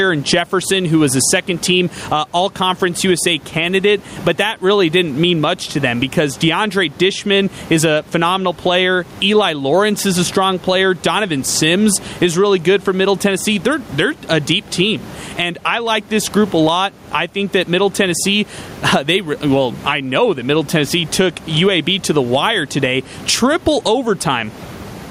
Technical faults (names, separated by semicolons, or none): gain pumping